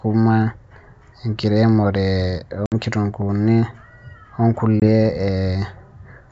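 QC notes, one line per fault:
2.66 s and 4.80 s, packet loss on an ADPCM call: about three packets (60 ms), then one (20 ms), were replaced by silence, throwing the decoder's predictor and step size out of step with the sender's. Speech drops out with hard edges and returns slightly distorted before resettling.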